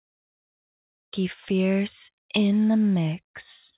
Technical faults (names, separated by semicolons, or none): cut-off start